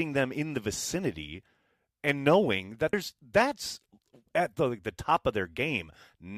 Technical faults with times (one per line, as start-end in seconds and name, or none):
2.92 stream segment skipped